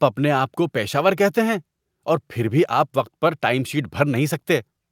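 A short piece of recorded speech with no technical faults anywhere in the signal.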